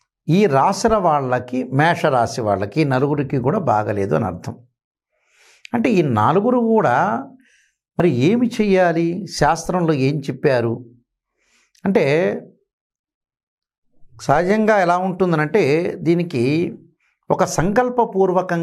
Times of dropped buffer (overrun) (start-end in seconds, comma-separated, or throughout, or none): 8.00